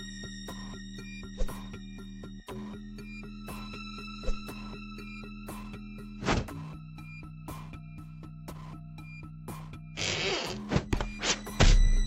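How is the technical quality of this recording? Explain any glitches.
No glitches or faults audible.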